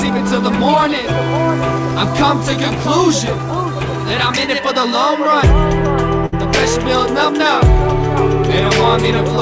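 At 6.26 s the sound briefly smears into a held, fading continuation lasting about 63 ms before picking up again at 6.34 s, a little further along than expected. This is a burst of packet loss: roughly 60 ms of audio was lost or came too late to be played, so the receiver stretched the last sound, turned it down, and then jumped ahead. The call path's band limit, with nothing above 8 kHz, is present throughout.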